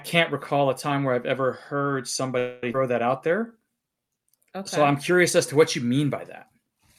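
From 2.38 to 2.64 s the speech halts and the last sound is stretched into a fading buzz lasting about a quarter of a second (242 ms), with no true silence in it. This call audio freeze is likely caused by packets arriving late and the jitter buffer running dry, so the receiver extended what it last had. When audio resumes it continues from exactly where it stopped, so nothing is lost, but the playout delay grows by the same 242 ms.

Shortly after, at 2.73 to 2.75 s, a skip ahead occurs. Playback jumps forward with only a 12 ms joint, and roughly 150 ms of speech is simply absent. The two sides are spliced almost directly, giving an abrupt, clipped transition. Dropping that stretch pulls the delay back down by about the same amount, offsetting most of the extra latency the freeze introduced.

From 3.27 to 4.80 s a jitter buffer slow-down follows. The receiver repeats individual pitch periods and small pieces of pauses to rebuild its reserve, adding 153 ms over that span. 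Speech runs at about 90% of normal speed while keeping its original pitch, so sounds come across as drawn out and slightly sluggish until normal pacing returns.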